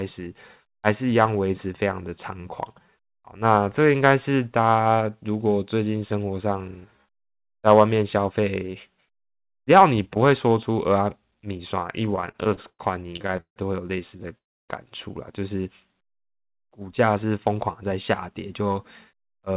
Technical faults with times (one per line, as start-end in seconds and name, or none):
12.06-12.81 repeated stalls (stutter)
13.17-13.58 repeated stalls (stutter)
14.18-14.36 repeated stalls (stutter)
14.38-14.71 call audio freeze
17.23-17.91 jitter buffer speed-up
18.34-19.57 jitter buffer speed-up